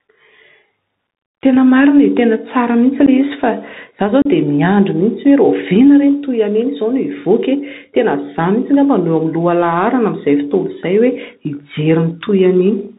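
Throughout this speech recording the level swings by around 5 dB, squashing loud and soft passages toward the same level. That pumping is gain pumping, likely caused by the microphone gain being set far too high so that a fast limiter or compressor keeps clamping down on every peak and then releasing into the gaps. The whole clip is also boxed into a narrow band, with nothing heard above 4 kHz. Sibilants come out scratchy, loud bright sounds break up, and a grainy hiss sits beneath the speech. These are the marks of the Bluetooth CVSD headset codec, which fits a 64 kbit/s link where each bit only nudges the waveform up or down by an adaptive step, so fast, loud movements outrun it. Two sharp-edged dropouts interrupt the speech. A brief 11 ms hole at 3.06 s fits a few lost packets, and a longer gap of about 34 ms from 4.22 to 4.27 s fits roughly ten. Each hole opens and closes abruptly, and the speech returns quieter for a moment. 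This is unconcealed Bluetooth headset packet loss: short voice packets between headset and phone never arrived, and silence or an idle pattern was put in their place with no attempt to mask it.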